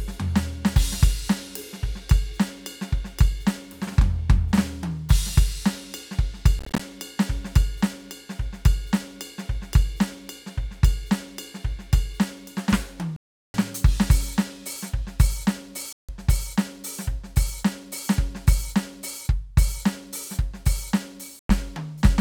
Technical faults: Bluetooth dropout

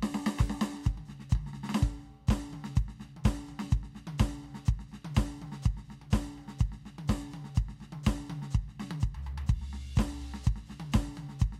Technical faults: none

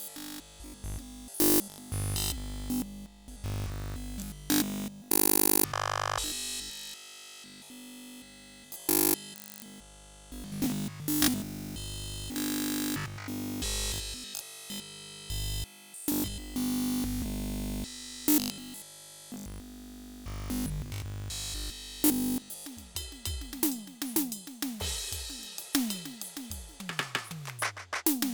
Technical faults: robotic sound from repeated short buffers

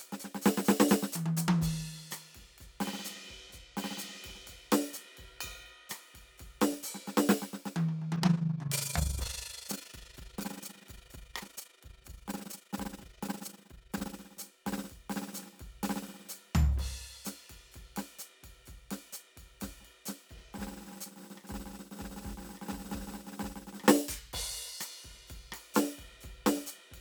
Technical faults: overlap-add ripple

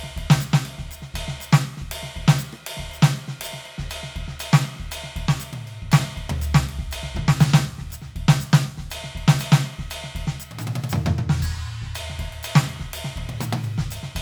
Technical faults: none

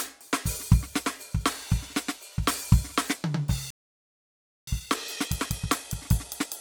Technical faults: generation loss; playback stall; time-compressed catch-up

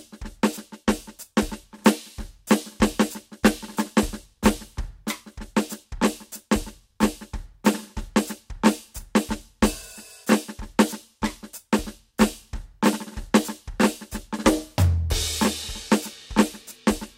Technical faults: none

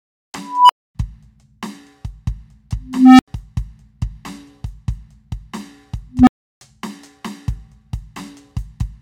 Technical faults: unstable filter

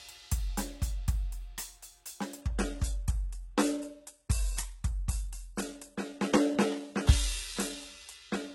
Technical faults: adaptive stream at a lower bitrate

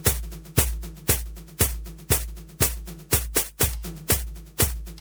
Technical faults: generation loss

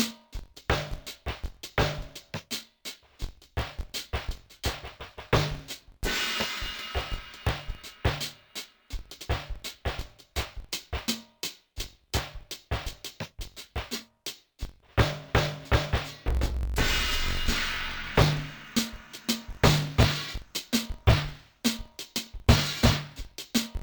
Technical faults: interleaved audio read as planar

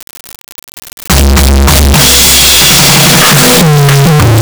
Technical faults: float read as integer

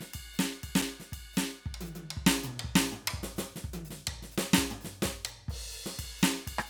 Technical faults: block of digital silence

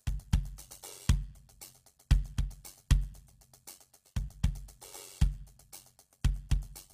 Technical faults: HE-AAC compression; overlap-add ripple

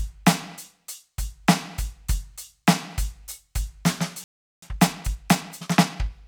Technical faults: playback stall; time-compressed catch-up

